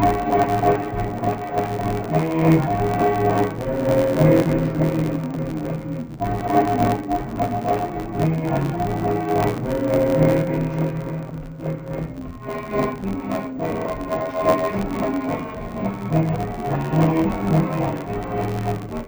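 From start to finish, interleaved audio read as planar: each 11.61 ms block, which fits a 512-sample buffer, has its alternating samples split into halves played together at half speed. With blocks this short, the sound is dull and robotic, buzzing at 86.1 Hz, with no clear octave drop like a plain pitch shift would give.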